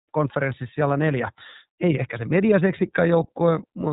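Across the whole clip the speech sounds muffled and plainly rough, with a slightly synthetic texture and nothing above 3.8 kHz. That is iLBC codec damage: narrowband coding of each frame on its own, which fits 30 ms frames at about 13 kbps.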